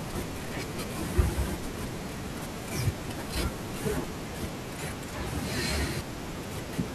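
A speech recording with one wireless microphone noise hit. From 1.55 to 1.73 s, a brief burst of static swishes over the voice and partly masks it. The hit lasts under a fifth of a second. It comes from an analogue FM radio link losing signal strength. Reflected copies of the transmission arrive out of step and cancel the direct path. As the carrier fades, receiver noise rises up through the audio.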